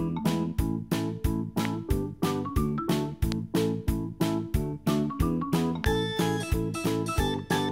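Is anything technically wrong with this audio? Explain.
Yes. Three loud pops occur, at 1.65 to 1.67 s, 3.32 to 3.34 s and 5.84 to 5.86 s. Each is one sharp click, about 15 dB above the sound, the last about 20 dB. A brief voltage pulse, likely from a switch or static, causes them. The sound continues underneath.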